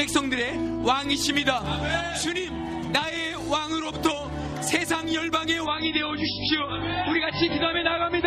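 From 5.66 s to the end, the audio abruptly turns dull and swirly with nothing above 5.5 kHz: an adaptive stream at a lower bitrate, consistent with a drop from about 128 to 16 kbit/s MP3.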